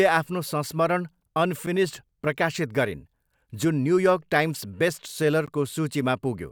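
Twice in this speech recording the output buffer likely went unfilled and was zeroed, leaving blocks of digital silence of about 7 ms at 1.66 s and 14 ms at 5.46 s, each heard as a hard-edged tick or dropout.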